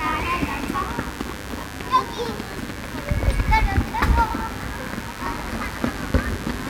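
A recording of sounds carries mains buzz from start to finish: a steady, raspy buzz built on 50 Hz harmonics extending into the kilohertz range, sitting roughly 15 dB below the wanted sound, caused by switching spikes from a dimmer, rectifier or unshielded cable entering the signal path.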